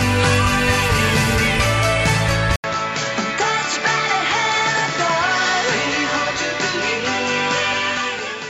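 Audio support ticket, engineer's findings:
Input switched to a poorer device at 2.56 s, to end. 80 ms dropout at switch, then band capped at 7.6 kHz, duller tone, level down about 5 dB, new noise floor roughly 40 dB under signal. Likely capture-device change mid-recording.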